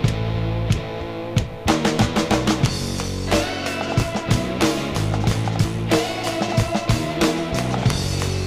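Dropped buffers (overrun) at 4.37 s and 5.64 s: at each point the audio jumps forward with no gap of silence, as though a sliver of sound had been cut out and the two sides butted together. The missing piece is roughly 20 ms each time. The likely cause is the recording software falling behind, so the hardware overwrote a block of samples before they were collected and that block was lost.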